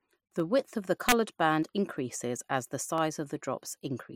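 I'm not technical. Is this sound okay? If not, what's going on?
No. Dropped samples are the likely cause of the three sharp clicks at 0.40, 1.63 and 2.98 seconds. A tiny sliver of the recording, a fraction of a millisecond, seems to go missing each time, so the sound wave jumps straight to a later point instead of flowing smoothly. The gap is far too short to hide any of the speech, but that sudden jump in the wave is heard as a brief tick.

An integer overflow at 1.09 to 1.12 seconds causes a harsh crack. When the speech gets loud there, the level is pushed slightly past the highest value the digital system can store. The number should have been held at the maximum, but it wraps around to the opposite extreme, flipping the wave from full up to full down. That violent jump sounds much sharper and uglier than ordinary distortion.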